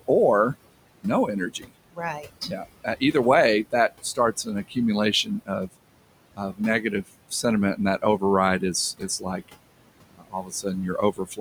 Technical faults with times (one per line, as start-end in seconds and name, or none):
0.00-11.41 noise suppressor artifacts
1.50-3.14 speech cut by the noise suppressor
3.72-4.77 speech cut by the noise suppressor
5.24-5.69 speech cut by the noise suppressor
6.31-7.45 speech cut by the noise suppressor
8.99-9.50 speech cut by the noise suppressor
10.08-10.66 speech cut by the noise suppressor
10.97-11.41 speech cut by the noise suppressor